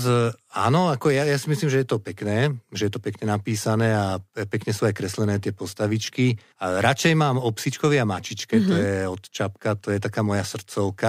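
A speech clip with clock slip clicks running from 0.17 s to 10.98 s: faint regular ticks roughly every tenth of a second, about a hundred in all. Each is a single dropped or repeated sample, likely from two unsynchronised clocks differing by around 150 ppm.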